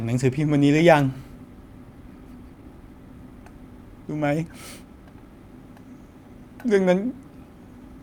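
From 2.15 to 5.06 s the speech hurries forward in a jitter buffer speed-up: with too much audio queued, the receiver cut out short pitch-period slices again and again, trimming roughly a fifth of a second so delivery runs at about 107% while pitch stays unchanged. On a spectrogram the harmonics keep their spacing but syllables and gaps look compressed in time; the waveform shows tiny splices where whole cycles were dropped.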